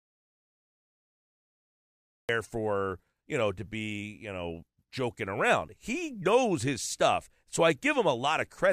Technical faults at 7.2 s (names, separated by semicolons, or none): none